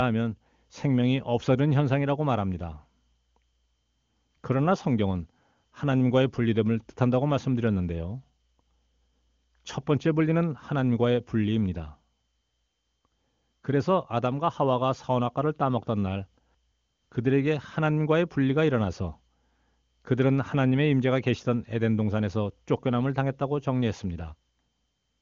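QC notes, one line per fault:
No faults heard in this speech clip. The AMR wideband (HD Voice) codec path is audible in the band ending at about 7.3 kHz, and the speech has the clarity that fits one of its higher rates, such as 23.85 kbit/s.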